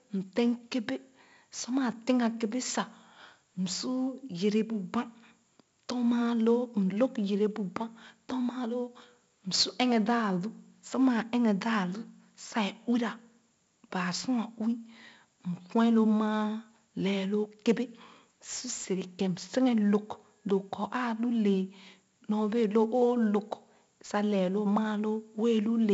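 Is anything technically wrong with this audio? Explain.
Yes. Throughout the speech a gritty hiss rides on every loud syllable, sharp onsets sound roughened, and nothing is heard above 7.7 kHz. This is heavy 4-bit ADPCM compression, which codes each sample as a coarse step from a prediction. At 64 kbps, the missing top end fits a 16 kHz sample rate.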